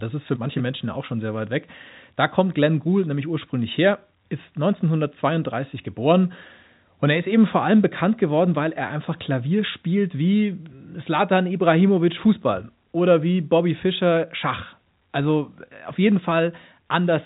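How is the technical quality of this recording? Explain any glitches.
No glitches can be heard: the speech comes through telephone-band coding that fits G.711 A-law at 64 kbps, with nothing passing above about 3.8 kHz.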